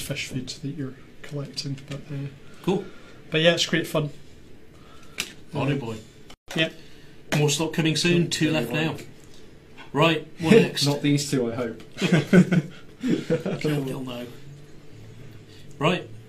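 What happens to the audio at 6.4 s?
At 6.34 s the sound drops out abruptly and resumes at 6.48 s. That is a gap at a join of encoded pieces, a gap of about 142 ms. The audio was encoded in separate pieces and then joined untrimmed. The padding on the last frame of one piece and the encoder's start-up delay on the next both remain. The edges are smeared by the codec. Afterwards the sound picks up exactly where it stopped.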